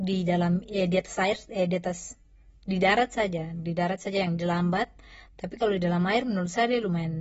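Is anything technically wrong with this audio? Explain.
Yes. Throughout the speech there is audible AAC compression damage. Nothing reaches above 7.6 kHz, so on a spectrogram the energy stops at a flat ceiling there. This is likely a low-bitrate AAC-LC encode, around 24 kbps, where coarse quantisation and a lowered cut-off leave the audio dull, smeared and warbly.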